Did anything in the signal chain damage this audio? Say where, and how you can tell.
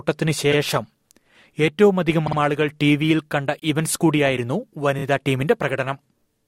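Yes. The damage is repeated frames, introduced at the compressed stage, when frames were written or sent. The speech stutters four times. At 0.51 s a 52 ms chunk plays twice. At 2.26 s a 52 ms chunk plays three times. At 3.59 s a 26 ms chunk plays twice. At 4.98 s a 26 ms chunk plays three times. Each repeat is a whole multiple of about 26 ms, which points to codec frames being duplicated. The decoder replays them, stretching the audio by about 0.24 s in total.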